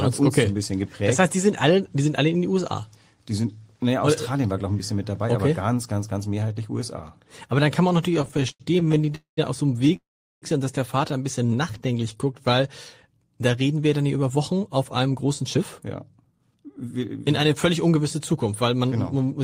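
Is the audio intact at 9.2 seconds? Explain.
No. At 9.2 seconds the audio is caught in a call audio freeze that runs from 9.15 to 9.39 s. The receiver ran out of audio to play, most likely because packets were held up in transit and the jitter buffer emptied. It stretched the last sound into a fading buzz or hiss for 220 ms, and about 120 ms of that decays to silence. Playback then resumes where it stopped, so the whole stream shifts 220 ms later. Nothing is lost, but a gap is inserted.

The freeze sits inside a longer stretch of repeated stalls (stutter), from 8.11 to 9.96 s. Here packets kept arriving late or too slowly, and the buffer kept running dry. There are 27 short gaps, the longest 87 ms. Each is filled by continuing the previous sound, adding 345 ms in total, about 19% of that span. Nothing is missing, but the audio drags and stutters throughout.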